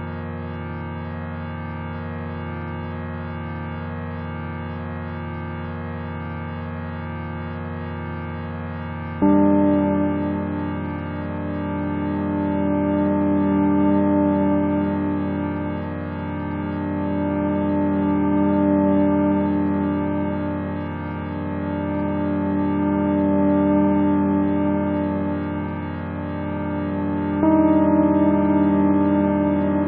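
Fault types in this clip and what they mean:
No faults detected; nothing to list.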